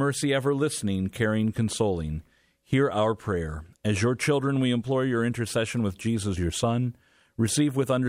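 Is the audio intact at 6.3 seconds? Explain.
Yes, the speech at 6.3 seconds plays through cleanly, with no dropout, click, distortion or other fault at that moment.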